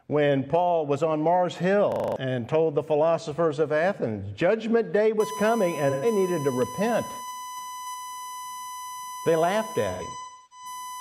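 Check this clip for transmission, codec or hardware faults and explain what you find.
Three kinds of fault are present.

A system hang loop runs from 1.92 to 2.16 s. The driver stalled while the hardware replayed one 40 ms buffer six times. It stutters at 25 Hz, and roughly 0.2 s of audio is lost.

USB whine starts at 5.20 s and lasts to the end. Bus frame current leaks through power or ground. It is a steady 1 kHz tone, about 10 dB below the signal.

AAC frame loss with concealment occurs at 5.90 to 6.06 s. The decoder filled 128 ms, which fits three lost frames, from the last good spectrum. It sounds smeared and noisy. A second loss spans 9.91 to 10.66 s, with 427 ms missing over about 0.6 s. Its longest gap, around 0.3 s, decays toward silence and fades back in.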